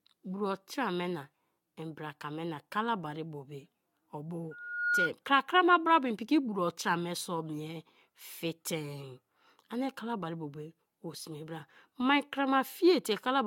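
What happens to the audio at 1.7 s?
The speech was likely decoded and re-encoded about five times with a lossy codec, each pass requantising on a shifted frame grid, which fits AAC-LC at 96 kbit/s. At 1.7 s, as throughout, this generation loss sounds swirly, hollow and smeared, with blurred attacks and nothing above 17 kHz.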